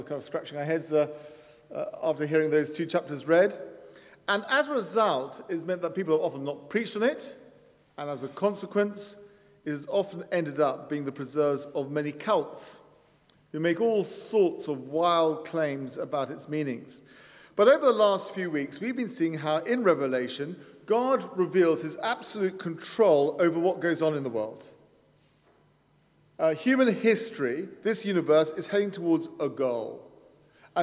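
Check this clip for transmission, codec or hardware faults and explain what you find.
No faults found anywhere in the clip; nothing in the signal needs attention.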